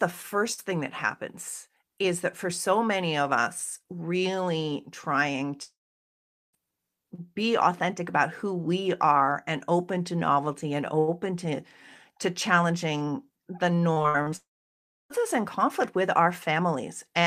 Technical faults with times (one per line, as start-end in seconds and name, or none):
5.63-6.55 long network dropout
13.93-14.34 repeated packet loss (robotic sound)
14.36-15.12 long network dropout